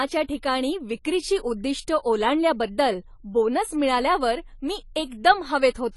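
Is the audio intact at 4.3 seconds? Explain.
No, not really. At 4.3 seconds the speech has the same dull, smeared quality it has from start to finish: nothing comes through above 11.5 kHz, and sibilants pick up a fizzy, warbly edge. That's likely AAC compression, which fits a low bitrate around 32 kbps. The encoder quantises each frame's frequency lines against a hearing model, and when bits run short it lowers the cut-off and leaves gaps in the spectrum.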